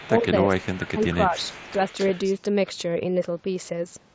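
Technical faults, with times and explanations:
0.0–0.23 s, 0.59–0.88 s and 1.29–2.33 s, echo leak: the far end's echo canceller likely left part of its loudspeaker pickup in the outgoing signal, so a faint delayed copy of the speech, about 20 dB down, trails the original by 335 ms in the first two stretches and by 269 ms in the third.
0.07–0.27 s and 0.78–1.74 s, speech suppressed in double talk: with both sides talking at once, the canceller likely could not separate near speech from echo and attenuated both. The speech dips in pieces, around 10 dB in the first stretch and around 15 dB in the second, across roughly 0.1 s and 0.4 s of sound.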